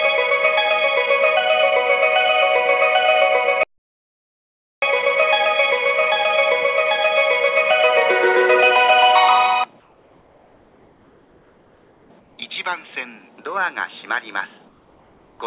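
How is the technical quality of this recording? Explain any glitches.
The recording has two kinds of glitch on top of a narrowband call sound. Nothing reaches above 4 kHz, which fits a telephone-grade codec such as G.711.

Audio dropout to silence, from 3.63 to 4.82 s: for about 1.19 s the sound vanishes into silence with no room tone, most likely because the input link failed while recording continued. The waveform shows a flat line, and the spectrogram shows a blank vertical gap.

Comfort noise in place of the background, at 9.8–12.1 s, 12.2–12.38 s and 14.68–15.4 s: in quiet stretches the real background, which sits about 36 dB below the loud parts, is likely swapped for synthetic noise from discontinuous transmission. The fill is about 3 dB quieter, steady and featureless. On a spectrogram it appears as smooth, uniform texture blocks.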